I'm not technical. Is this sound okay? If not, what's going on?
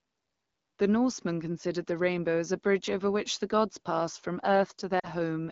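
No. Lost AMR speech frames: around 4.99 to 5.10 s, just after "the gods passed from", a brief burst of call data was garbled, so the phone stretched out the last bit of speech and let it fade to near silence.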